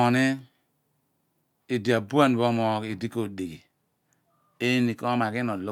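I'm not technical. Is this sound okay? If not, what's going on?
No, not quite. From about 3.28 seconds through to the end, the speech picks up a faint gritty fizz that clings to the louder and brighter parts. That's crude rate conversion: the audio was switched between sample rates, which sounds like going from 44.1 kHz to 48 kHz, by simply blending neighbouring samples instead of filtering properly. The leftover error forms its own stray tones, unrelated to the voice, which you hear as that buzz.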